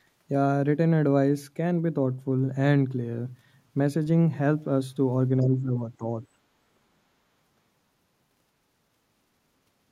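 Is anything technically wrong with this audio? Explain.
Yes, there are echo-canceller problems in this speech clip, all between about 5.4 and 6.4 s.

Other side's voice leaking through: At 5.41 to 5.46 s and again at 6.23 to 6.27 s, brief scraps of a second voice appear, very faint, roughly 35 to 40 dB below the main talker. The likely cause is that the device was playing the far end on a loudspeaker and the echo canceller failed to subtract all of it from the microphone. What remained passes as short fragments.

Speech suppressed in double talk: From 5.41 to 6.04 s, the talker's level sags by around 10 dB in places, for about half a second in total. Both ends appear to be speaking at once. The canceller most likely could not tell the local voice from the loudspeaker echo and attenuated the whole signal. The talker's own speech therefore dips exactly where the overlap occurs.

Background gated by the echo canceller: From 6.32 to 6.43 s, about a tenth of a second, the room sound drops by about 19 dB and then returns. 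The canceller clamped the microphone hard while the loudspeaker was active and then released it. The ambient bed briefly vanishes and comes back, which is audible as a short hole in the background.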